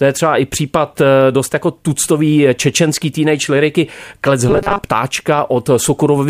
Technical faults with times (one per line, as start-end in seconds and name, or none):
4.49-4.84 robotic sound from repeated short buffers